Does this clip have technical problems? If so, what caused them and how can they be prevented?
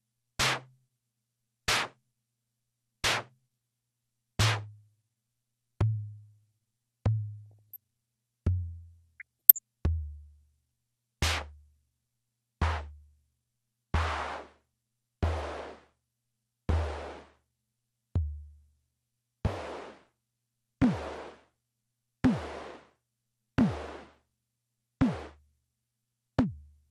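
Yes. Throughout, the sound is dull, with upper bands flickering and a granular, gurgling roughness. This is likely MP2 compression at a bit rate around 80 kbps, too low for the encoder to keep every sub-band. It differs from DAB burbling because it is constant, not in bursts. Encoding at a higher bit rate would prevent it.

DAB burbling appears at 1.75 to 1.83 s, 7.51 to 7.76 s and 9.20 to 9.59 s as short bursts of noise in single sub-bands. Bit errors from weak reception got past the error correction and corrupted sub-band levels frame by frame. These brief, erratic jumps differ from the steady compression dullness. A stronger, more stable DAB signal would prevent them.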